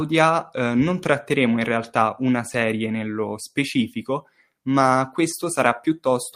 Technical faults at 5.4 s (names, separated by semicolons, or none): lost packet rebuilt from error correction